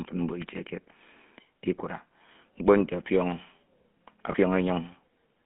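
Speech coded through the GSM full-rate codec, with plainly audible damage throughout: a buzzy, gravelly roughness from the pulse-driven excitation and a line band of about 150 Hz to 3.4 kHz, which fits the 13 kbps full-rate coder. Between 4.32 and 4.35 s there are lost GSM frames, heard as a short, rough metallic ring. The decoder held the previous frame's settings in place of the missing audio, and the length fits a single dropped 20 ms frame.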